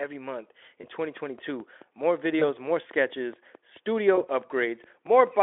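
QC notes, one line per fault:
0.81–0.88 s, 2.39–2.46 s, 4.15–4.26 s: VoIP packet loss concealed by the speech codec. Brief buzzy smears that fade and leave the sound weak afterward, as if a single 20 ms frame went missing each time. The decoder filled each gap by extrapolating the last pitch and filter at falling gain.
1.17–5.28 s: train of clicks. About twenty evenly spaced ticks at roughly 4.6 per second, peaking near the level of the speech and audible through the pauses. They are likely interference or a struggling interface, while the Speex narrowband path (300–3500 Hz) adds only faint codec roughness.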